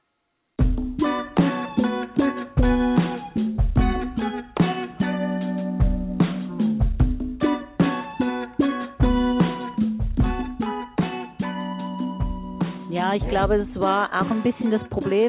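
Nothing here is technically wrong; the sound simply comes over a call line, with the narrow feel of a G.711 A-law codec that leaves nothing above 4 kHz.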